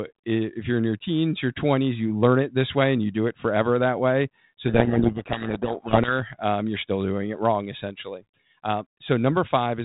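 From 4.68 to 6.13 s, a codec payload misread buries the speech in harsh distortion: G.726 code words are read in the wrong bit order. On a spectrogram this looks like dense noise filling the band below 4 kHz, and on a waveform it looks jagged. It ends just before "um you're still doing".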